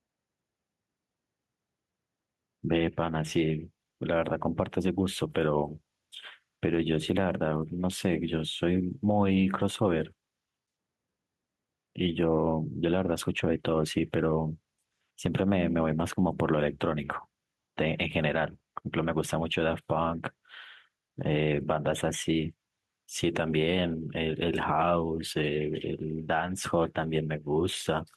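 Gain pumping runs through the whole speech: the level is pulled down under each loud sound, swinging by around 5 dB, and the sound is squashed. The likely cause is excessive input gain with a fast limiter. Unlike a noise gate, pumping makes the level swing rather than cut out.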